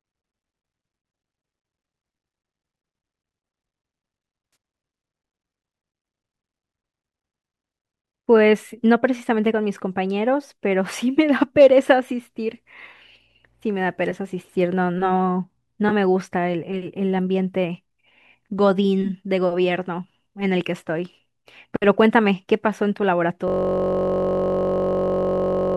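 At 4.53 s there's a brief smeared, noisy patch in the speech lasting about 30 ms, and a shorter one at 15.89 s of about 20 ms. That's AAC frame loss with concealment. Frames went missing, which fits two or three short low-delay frames, likely from AAC-ELD, and the decoder patched the gaps from the last good spectrum.

From 23.48 s to the very end, a system hang loop takes over. The machine froze while the audio hardware kept replaying one 21.33 ms chunk, which fits a 1024-sample buffer, so you get a steady buzz repeating at about 46.9 Hz.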